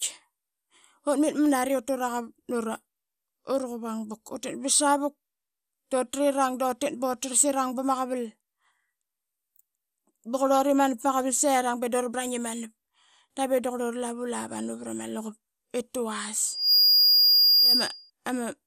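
Throughout the recording the speech sounds dull and carries a gurgling, granular grain that points most likely to MP2 compression at a low bitrate, around 80 kbps. Starved of bits, upper sub-bands drop out and flicker back, and the remaining bands are coarsely quantised. That band-switching swirl separates it from a simple low-pass muffling.

From 16.46 s, just after "vrama luqup I tavas", a loudspeaker feedback squeal sets in: a single steady tone at 4.8 kHz swells over roughly a third of a second to about 10 dB above the speech and holds until 18.10 s. The loop between microphone and loudspeaker exceeds unity gain at that one frequency. Its self-sustaining rise and fixed pitch distinguish it from a passing whistle or interference tone.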